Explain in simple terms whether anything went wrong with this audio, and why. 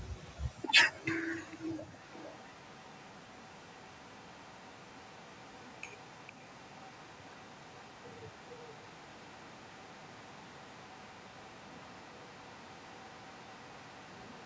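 Echo leak: a faint copy of the speech trails about half a second behind at 0.23 s and 1.36 s, then from 1.99 s onward, likely from a leaky speakerphone.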